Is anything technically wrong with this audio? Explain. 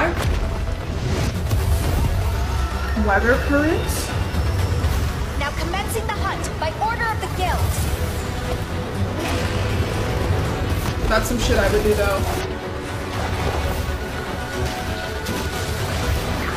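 Yes, there's a recurring glitch. Damaged data in a compressed stream shows up five times: 1.26–1.32 s, 7.85–7.90 s, 10.87–10.93 s, 12.40–12.46 s and 14.12–14.18 s. Each time, corrupted bytes throw the decoder off sync until it finds the next valid frame, giving a brief glitch of about 50–60 ms.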